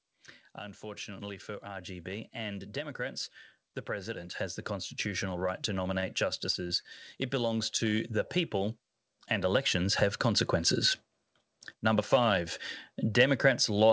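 From 0.58 s to 10.54 s an automatic gain rising fault lifts the level by about 14 dB. The control judged the input too quiet and raised its gain slowly, so speech and background noise swell together across those ten seconds.

At 6.00 to 6.04 s a short stall from a late packet occurs. The jitter buffer ran dry and the receiver held the last sound for about 21 ms until the packet arrived, producing a slightly drawn-out, buzzy moment with nothing lost.

At 6.52 to 6.56 s and again at 6.68 to 6.72 s comes short concealed packet loss. Each time 20 ms of audio failed to arrive, and the gap was patched by extending the preceding sound, heard as a brief smear or wobble.

At 6.82 to 6.86 s a second late-packet stall holds the sound for about 23 ms in the same buzzy way. Throughout, the call path carries nothing above 8 kHz, which fits a wideband codec such as G.722.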